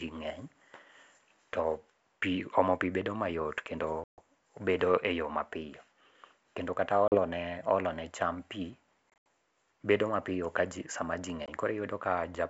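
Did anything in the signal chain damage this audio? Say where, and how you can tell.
Yes: packet loss on an ADPCM call, at the network stage. Sharp silent holes at 4.04–4.21, 7.08–7.18, 9.10–9.25 and 11.46–11.49 s knock the decoder's predictor out of step, so speech resumes slightly distorted.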